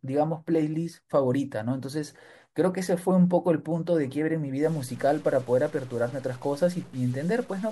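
Speech, with a harsh, buzzy edge from 4.63 s to the end and a hiss filling the pauses in that stretch. The fault is a stuck bit, likely one data bit held fixed, pushing about half the samples off by a step of about -45 dBFS.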